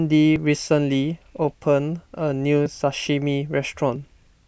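At 0.36 s the speech lurches forward, skipping a few tens of milliseconds, and briefer skips, around a hundredth of a second each, follow at 2.66 s and 3.96 s. None leaves a gap of silence. Each is likely a dropped buffer (overrun): the software fell behind, the hardware overwrote samples before they were collected, and the audio on either side was spliced straight together.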